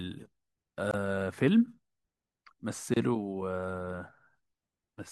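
At 0.91 to 0.94 s and again at 2.94 to 2.96 s, the speech drops out briefly. Each is a gap at a join of encoded pieces, about 25 to 27 ms, two seconds apart. Untrimmed encoder delay and end padding leave silence. The speech then resumes where it stopped.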